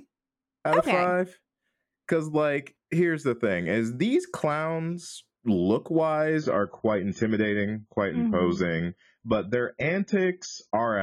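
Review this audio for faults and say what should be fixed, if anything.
An adaptive stream at a lower bitrate takes over at 6.38 s, right after "is these clowns look", and continues to the end at 11.02 s. With no gap, the speech turns dull, with more codec artefacts and nothing above 7.1 kHz, which fits the player dropping from a rendition around 96 kbit/s to one near 16 kbit/s when throughput fell. Buffer further ahead, or set a higher minimum rendition, so quality holds through brief slowdowns.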